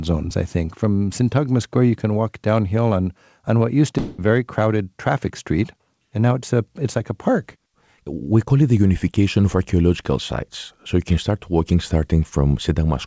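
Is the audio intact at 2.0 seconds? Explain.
Yes, at 2.0 seconds the speech is intact, with only the normal character of the call path, whose content stops at 8 kHz as a wideband call codec would produce.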